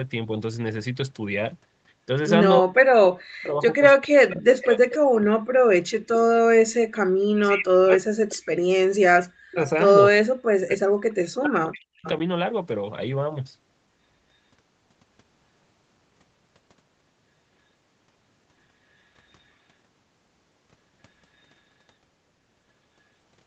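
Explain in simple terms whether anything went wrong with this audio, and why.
Speech suppressed in double talk occurs from 2.59 to 6.86 s, 7.33 to 8.7 s, 9.08 to 9.61 s and 10.22 to 12.06 s, where the voice sinks sharply or drops out, likely because an echo canceller muted it while both sides talked. Echo leak appears as brief, faint repeats of the voice about 0.3 s late, at 4.60 to 4.64 s, 4.91 to 4.98 s, 6.13 to 6.18 s and 12.04 to 12.09 s. These likely come from loudspeaker sound slipping past the echo canceller.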